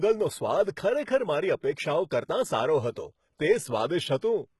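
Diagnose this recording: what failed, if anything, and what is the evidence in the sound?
The fault is at the codec stage. The speech has nothing above 11.8 kHz, and its treble sounds gritty and metallic, with lispy s sounds. This is likely HE-AAC compression at a very low bitrate, around 16 kbps. Band replication copies lower bands upward, so the harmonics do not line up.

A second codec fault is pre-echo from 4.18 to 4.22 s, about 41 ms long. A short hiss comes just before an attack, and the onset sounds smeared. The transform block spreads noise sized for the loud attack into the quiet moment before it.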